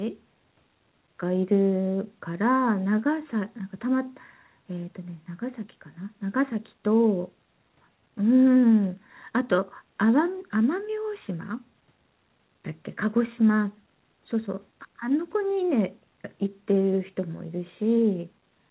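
No technical faults are audible in the speech, which carries the narrowband character of a telephone-grade call codec such as G.711 mu-law, with nothing present above 4 kHz.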